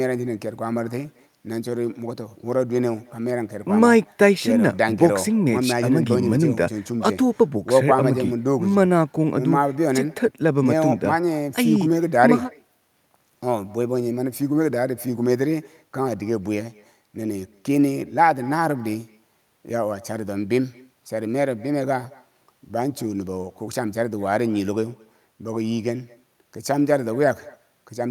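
All the way through, the speech carries echo with no canceller: the far end's loudspeaker feeds its microphone, so every phrase returns around a fifth of a second later as a faint, thin copy, about 26 dB below the talker.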